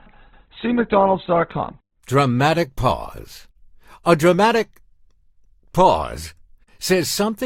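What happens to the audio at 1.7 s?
At 1.7 s the speech is still in the opening stretch of an adaptive stream starting at a low bitrate, which runs from 0.0 to 2.0 s. The player began on a cheap version of the stream to start quickly. It moves to a better one once it has judged the connection. Until then nothing above 4.2 kHz is present, so the speech sounds dull and smeared with codec artefacts. This points to roughly 12 kbit/s Opus. At 2.0 s the quality jumps up abruptly, with no gap.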